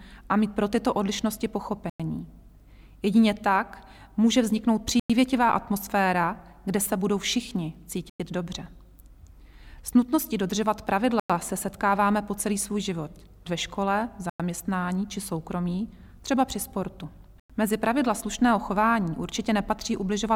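A gap between chunks interrupts the audio at 1.90, 5.00, 8.10, 11.20, 14.30 and 17.40 s: 100 ms silences inserted at each join of 3-second chunks. Unlike packet-loss dropouts, nothing is missing and the spacing is strictly regular.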